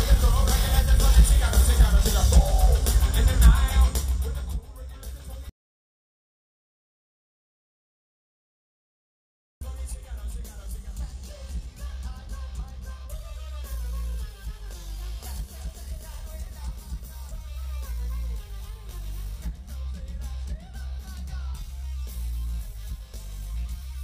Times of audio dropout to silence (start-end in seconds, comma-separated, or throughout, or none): 5.50-9.61